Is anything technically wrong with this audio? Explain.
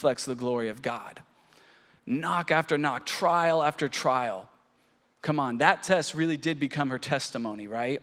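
No, nothing in this speech clip points to a technical fault. It has passed through Opus voice compression in its fullband hybrid mode, and the light traces of coding it leaves fit a rate of about 24 kbps.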